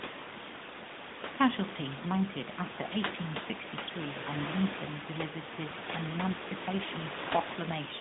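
No technical faults are present.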